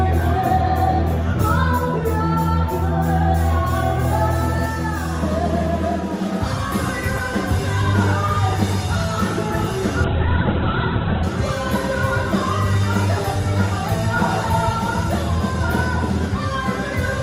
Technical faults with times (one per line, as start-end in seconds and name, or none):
10.05-11.30 call bitrate drop